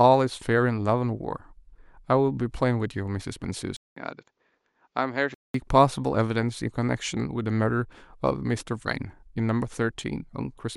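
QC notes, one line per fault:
3.76–5.54 s: likely an input switched to a poorer device. A 200 ms silence opens the span, then the speech turns dull, with nothing above 7.6 kHz, a level roughly 5 dB lower and a faint new background hiss from the different pickup. Full bandwidth returns at 5.54 s.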